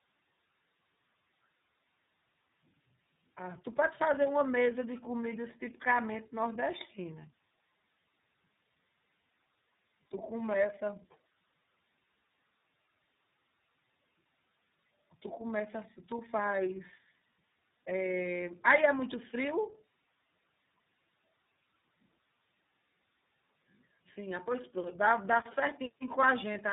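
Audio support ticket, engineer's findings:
Tandem speech coding, whole clip. Speech rough, muffled, warbly; no content above 3.8 kHz. Probable path: GSM full rate 13 kbit/s, then G.711 A-law, then iLBC 13.33 kbit/s. Two speech codecs decode and re-encode in series, errors compounding. Worse than one low-rate codec alone.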